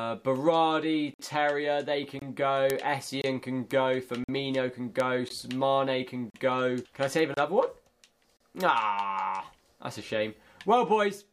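Starting at 1.14 s, the sound drops out into hard-edged silence about once a second, at 1.14, 2.19, 3.22, 4.24, 5.29, 6.30, 7.34 and 8.37 s. Each hole lasts between roughly 18 and 55 ms, the longest at 1.14 and 4.24 s. This is a gap between stream segments. The stream arrives in 1-second segments, and their time stamps leave a small space at each join that the player fills with silence. Nothing is lost. The audio simply pauses and resumes.

Mixed in with these holes are isolated sharp ticks at 2.70, 3.71, 5.00 and 7.19 s. Each is a brief, broadband click with no relation to the surrounding sound. These are bit error spikes. A single flipped bit makes a sample value jump by a power of two and then snap back on the next sample. At 2.70, 3.71 and 7.19 s only one sample is affected. At 5.00 s three consecutive samples are hit, though it still registers as a single tick.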